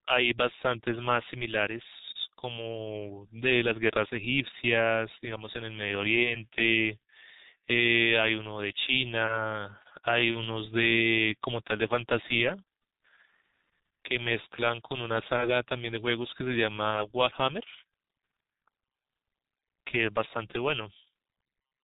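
Throughout, the G.723.1 codec at a low rate, which fits about 6 kbit/s, discards everything above 4 kHz, leaving the speech heavily muffled and hoarse with smeared consonants. At 6.23–6.30 s, 10.32–10.37 s and 16.91–17.05 s, VoIP packet loss concealed by the speech codec replaces a lost 30 ms frame with an extrapolated guess, producing a brief stretched, fading smear.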